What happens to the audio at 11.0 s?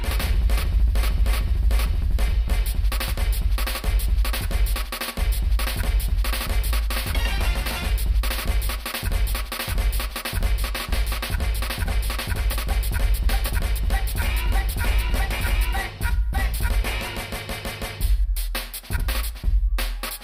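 At 11.0 s the audio is inside a stretch of channel delay (comb filtering), from 10.52 to 12.43 s. One channel lags the other by about a single sample, roughly 0.02 ms, and the two are summed to mono. Content common to both cancels where they fall out of phase. With a gap that small, the first notch sits near 20 kHz. The result is a slight dulling of the very top end, not an obvious hollowness.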